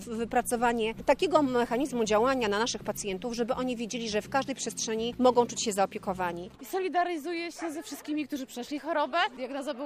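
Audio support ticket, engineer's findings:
GSM signalling bursts, 5.25 to 6.52 s. Galloping dit-dit-dit ticks and short buzzes at 217 Hz, around 25 dB under the sound. Points to a nearby 2G handset handshaking, with RF pulses rectified somewhere in the analogue input stage.

GSM phone buzz, 6.64 to 7.61 s. Steady, raspy 217 Hz buzz packed with harmonics, about 35 dB down, unrelated to the audio. Fits the same handset now in a call, its continuous burst train demodulated by the front end.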